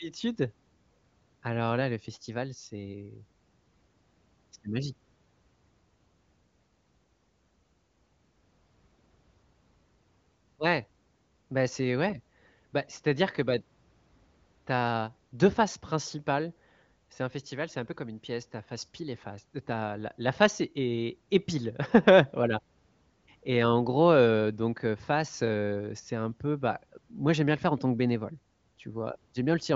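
No audible faults found.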